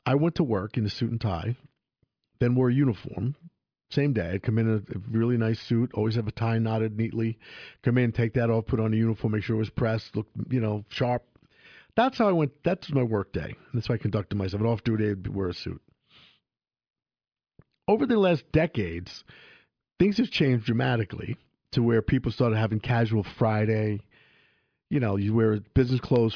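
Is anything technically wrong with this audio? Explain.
No, nothing technically wrong can be heard in this speech recording. There is no fault to point to at any moment in the clip.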